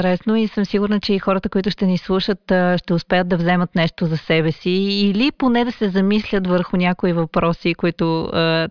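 A speech recording with no technical fault to report. There is nothing in it that calls for a time or a cause.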